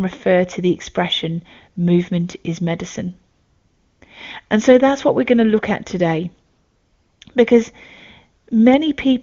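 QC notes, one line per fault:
3.33 to 4.01 s, 6.49 to 7.21 s and 8.43 to 8.47 s, AMR comfort noise: in each pause the real background gives way to a smooth, even synthetic hiss, because the phone stopped sending speech frames and the receiver generated noise from a rough level and spectrum estimate. Unlike a noise gate or dropout, the gap is filled rather than silent, and the texture audibly switches at the edges. The HD Voice codec underneath sounds clean, which fits a high-rate mode.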